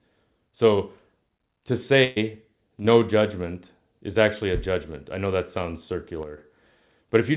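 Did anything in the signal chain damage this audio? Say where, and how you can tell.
Yes. At the network stage, a burst of packet loss hit between 2.04 and 2.18 s: roughly 120 ms of audio never arrived in time to be played. The receiver covered the hole by extending the last sound it had and letting it fade, so there's no silence, just a smeared, decaying continuation. The speech then picks up further along, with that stretch of the original simply gone.

From 2.79 to 2.85 s, one channel drops out. For about 50 ms the level falls abruptly by about 6 dB, which is what happens when one side of a stereo pair vanishes and the mono sum loses half its common content. Anything carried only in that channel disappears during the gap. The likely cause is a momentary break in the wiring or converter feeding that channel, upstream of the G.711 call path, which limits the band at 4 kHz.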